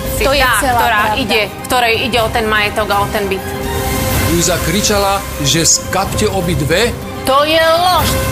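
No technical faults can be heard anywhere here.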